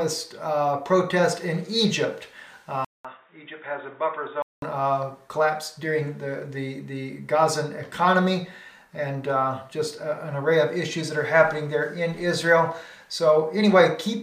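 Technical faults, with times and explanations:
2.85 to 4.62 s, input switched to a poorer device: the capture likely jumped to a different, lower-grade input, such as another microphone or a headset's call profile. At 2.85 s a short gap of about 200 ms opens, and the sound comes back dull and boxy, with nothing above 3.8 kHz. It is also a few decibels quieter and carries a faint new background noise well below the signal. At 4.62 s the fuller sound returns.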